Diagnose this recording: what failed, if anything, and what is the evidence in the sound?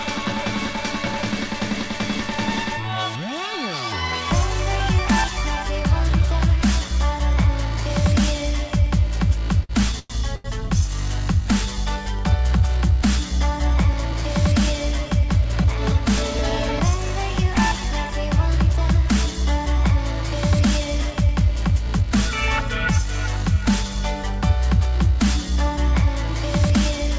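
Two short stalls from late packets, at 9.64 to 9.71 s and 10.36 to 10.46 s, point to the network and jitter-buffer stage of a call path. The sound is band-limited to nothing above 8 kHz, which fits a wideband call codec. In each stall the last sound is stretched, for 52 ms and then 88 ms, and then resumes from the same point. Nothing is lost, but the playout delay grows each time.

A call audio freeze runs from 9.99 to 10.12 s, between the two stalls. About 104 ms of concealment is inserted: the last sound continues and fades, and reaches brief silence for about 10 ms before playback picks up where it stopped. The likely cause is packets held up in transit long enough to drain the jitter buffer completely. This adds a gap without removing any content.

Jitter buffer speed-up follows the backlog, from 13.93 to 17.85 s at 102% speed and from 20.84 to 22.03 s at 103%. The receiver repeatedly cuts out short pitch-period slices to bring its delay back down. 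It removes around a tenth of a second in the first stretch and a few tens of milliseconds in the second. The audio runs slightly faster over those spans while the pitch stays unchanged.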